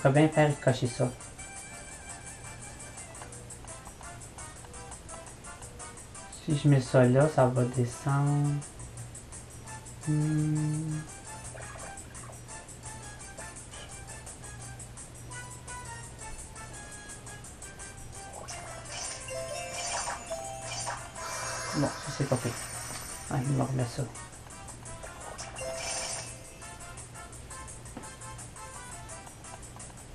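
Right from the start the whole clip has a dull, gurgling quality, with a grainy edge to whatever's left in the top end. That's MP2 compression, and it's plainly audible here. The likely cause is an MPEG Layer II encode at a low rate, something that fits roughly 80 kbps. There aren't enough bits to go round the sub-bands, so the upper ones drop out and flicker, and the rest get quantised coarsely enough that you hear the granular texture.

Then at about 19.46 s there's a quick burst of DAB burbling, a few watery blips over the audio for a moment. It sounds like bit errors slipping past the error correction into the MP2 data, with only a small fraction of bits corrupted. The bad samples put short blips of noise into individual sub-bands, and wrong scale factors, where they get through, make sub-bands jump in level, and three frames were affected.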